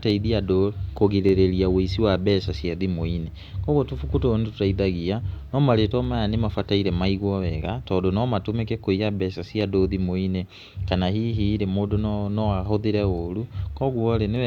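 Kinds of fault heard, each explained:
Clock drift buffer slips: a click recurs every 1.19 s through the speech, about fifteen times between 0.10 and 14.36 s. The likely cause is two devices on separate clocks, differing by roughly 150 ppm, so the buffer between them creeps until a few samples, around seven, are dropped or repeated. The strictly even spacing sets it apart from packet-loss glitches, which fall at irregular times and leave longer gaps.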